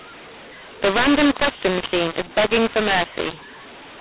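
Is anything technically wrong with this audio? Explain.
Yes. The speech has a mu-law and A-law mix-up throughout. It was coded as mu-law telephone audio but decoded as A-law. The two logarithmic scales disagree, so levels come out wrong. The speech sounds harsh and distorted, and pauses fill with hiss. The narrow band fits 8 kHz G.711 telephone coding.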